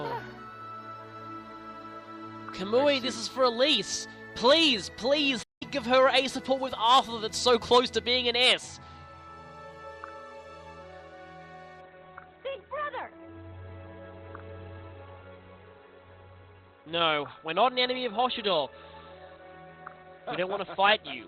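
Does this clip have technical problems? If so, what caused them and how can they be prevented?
Yes. At 5.43 s the player most likely ran short of buffered data or had its output thread blocked, so nothing reached the output until it recovered. The result is a playback stall: the sound cuts out mid-flow for about 180 ms, falling silent until 5.63 s, then carries on. Keeping a deeper playback buffer and running the audio thread at high priority, free of blocking work, would prevent this.

From 11.81 s to the end, the adaptive stream switched down to a lower bitrate, the kind of step a slowing connection triggers. The change fits a move from roughly 64 kbit/s to 16 kbit/s Opus. The quality drops suddenly, with no gap: nothing above 4.4 kHz survives, so the sound turns dull and muffled, and codec artefacts become more audible. Giving the stream more bandwidth headroom, or setting a higher minimum bitrate rung, would prevent this.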